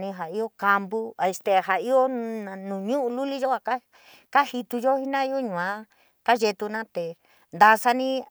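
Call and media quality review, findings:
Nothing to flag on this speech clip; no audible faults anywhere in it.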